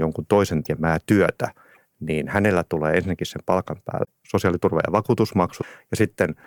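At 0.64, 1.74 (just before "niin hänellä tulee ensinnäkin"), 4.04 (right after "tulee ensinnäkin sen palkan") and 5.61 s, the speech skips ahead with a 28 to 44 ms chirp, noise burst or gap, likely a broken MP3 bit reservoir where cut frames leave later ones reading the wrong bytes.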